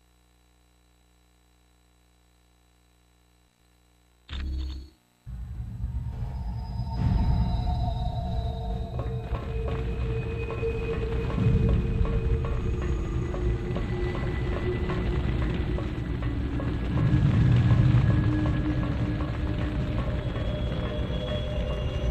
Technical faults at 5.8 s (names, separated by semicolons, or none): damaged data in a compressed stream